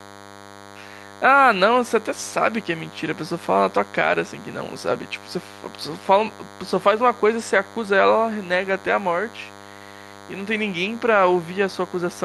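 A nearby DECT transmitter's radio bursts, arriving 100 times a second, are rectified in the audio circuit. The result is a DECT cordless phone buzz running under the speech throughout, thin, harmonic-rich and roughly 20 dB down.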